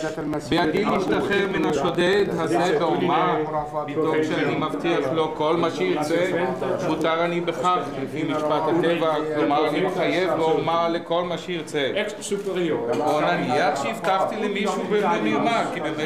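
From 0.09 s to 2.44 s the sound carries periodic USB or driver dropouts. Roughly every 62 ms, about 16 times a second, something stalls the audio path and a sliver of about 2 ms is skipped outright. That happens around forty times, heard as an even train of ticks riding on the signal. The waveform shows small abrupt jumps where the two sides of each gap butt together, and the spectrogram shows thin, evenly spaced vertical broadband lines.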